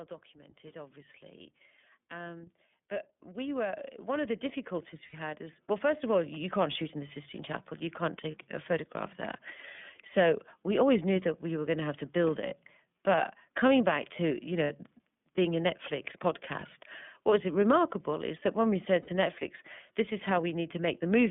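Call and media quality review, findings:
iLBC codec, throughout: narrowband line, roughly 150 Hz to 3.5 kHz, nothing above. Speech plainly rough and synthetic from independent per-frame excitation coding. Loss behaviour fits the 30 ms frame, 13.33 kbps mode.

Automatic gain rising, 0.33 to 6.86 s, ending just before "in the": voice and background swell together by about 17 dB over several seconds. AGC judged the input too quiet and ramped its gain slowly.

Lost iLBC frames at 5.07, 8.31, 14.64 (after "coming back to you") and 19.02 s (after "that when we said"): brief held buzzy-breathy vowel, 60 ms each except 30 ms at 8.31 s. The decoder repeats the last pitch cycle mixed with noise, then recovers immediately because frames stand alone.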